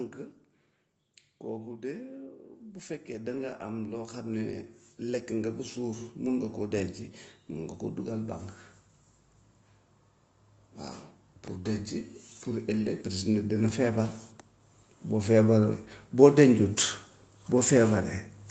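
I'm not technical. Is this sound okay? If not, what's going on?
No. There is automatic gain rising from 3.09 to 8.48 s, and again, more mildly, from 12.46 to 14.19 s. The call's automatic volume control decided the speech was too quiet and turned it up gradually, so the voice and the background noise behind it both swell louder together over those few seconds. The first rise is the bigger and slower of the two.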